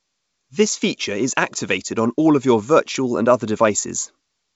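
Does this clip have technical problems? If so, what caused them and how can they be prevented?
No, there's nothing to fix here: it's speech carried over G.722 wideband telephone coding at 64 kbit/s, so the top end simply stops at about 7.7 kHz as that path is designed to, and there's nothing to prevent.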